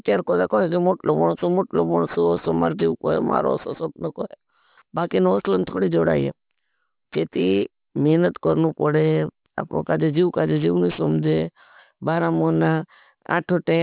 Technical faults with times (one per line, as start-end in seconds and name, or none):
0.00-13.82 aliasing